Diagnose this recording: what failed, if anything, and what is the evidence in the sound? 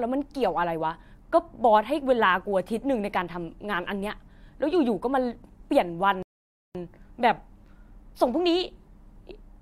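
At 6.23 s the speech drops abruptly into silence and stays silent until 6.75 s, then carries on from exactly the point where it broke off, with nothing skipped or repeated. That is a rebuffering stall at the playback stage. The player drained its store of downloaded audio and paused until more data arrived from the network. No sound is lost, but the pause inserts about 0.52 s of dead air and makes the recording that much longer.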